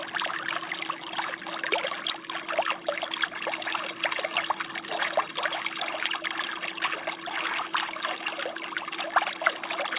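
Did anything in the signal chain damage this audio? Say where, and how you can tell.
No, nothing in the signal chain damaged this audio. It went through a call path whose content stops at 4 kHz, which fits a narrowband G.711 mu-law link at 64 kbps working as designed.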